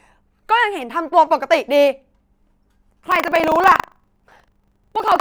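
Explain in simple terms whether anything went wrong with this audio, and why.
From 3.0 s to the end, the speech picks up a robotic buzz, about 25 times a second. That's buffer tearing: playback and the software filling its buffer slipped out of step, so a small slice of each chunk replays audio from roughly 70 ms earlier.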